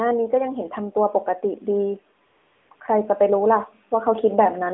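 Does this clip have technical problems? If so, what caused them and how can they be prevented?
Yes. From 2.26 to 2.70 s, and briefly around 2.76 to 2.80 s, there's AMR comfort noise. The phone decided nobody was talking, stopped sending speech frames, and the far end filled those gaps with a smooth synthetic hiss standing in for the real background. Easing the voice activity detection, or turning off discontinuous transmission where the network allows it, would keep those pauses real.

Then from about 2.97 to 4.69 s you get automatic gain rising. The gain control thought the input was too quiet and crept the level up by about 3 dB, so voice and background swell together. A steadier mic distance and a fixed or slower gain setting would prevent that drift.

The narrowband mobile codec underneath is working as expected, with the usual telephone band and only light coding damage.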